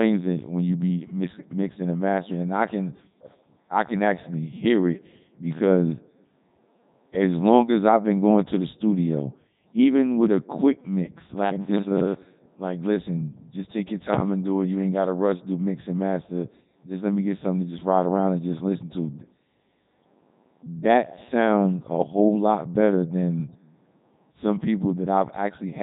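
Speech shows Codec 2 vocoder damage throughout: sine-wave resynthesis sounds buzzy and robotic rather than merely muffled like band-limiting, with nothing above 3.8 kHz, consistent with 3.2 kbit/s.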